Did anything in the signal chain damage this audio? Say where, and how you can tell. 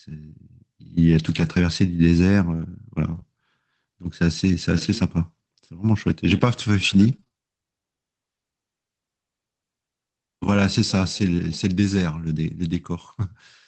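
Yes, the network stage. Lost packets rebuilt from error correction at 1.11–1.41 s and 3.11–3.17 s: rougher, noisier audio with no gap, because the decoder played low-bitrate copies.

Short concealed packet loss from 3.19 to 3.22 s: about 20 ms never arrived, and the receiver continued the last sound. The result is a brief smear rather than coarse, noisy audio.

Scattered short gaps from 6.10 to 7.34 s: about four separate holes of roughly 20 ms each were patched by continuation. These are spread out, not one event.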